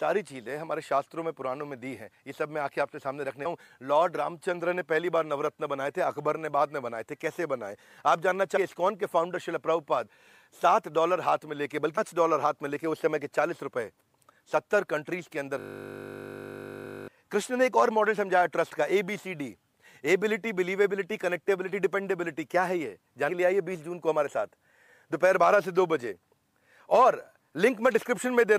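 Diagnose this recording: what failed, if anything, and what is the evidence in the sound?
At 3.45, 8.56, 11.97 and 23.3 s the audio jumps forward with a soft, smeared blip, not a hard click, dropping roughly a fifth of a second, a sixth, nearly a third, and a sixth again. This is compressed frames skipped, a codec or storage fault. Whole coded frames, about 24 ms each, were missing or rejected as damaged by the decoder. Overlapping neighbouring frames blur each join into a blip.

From 15.60 to 17.08 s the audio turns into a steady, mechanical buzz at 50 Hz. One 20 ms fragment repeats exactly, about 90 times, for roughly 1.5 s. This is a system hang loop at the driver or buffer stage. The host stalled while the sound hardware kept replaying the same short ring buffer. Its 20 ms length fits a small buffer, which is why the loop sounds like a buzz and not a stutter.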